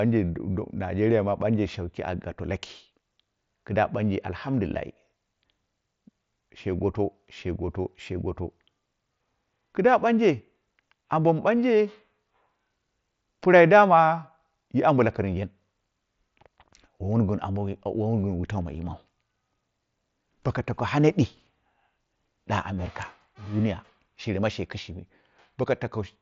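Nothing here stands out as a fault: the speech comes across the way you'd expect from a Bluetooth headset link on the mSBC wideband codec, and there's no dropout, glitch or other problem anywhere along the way.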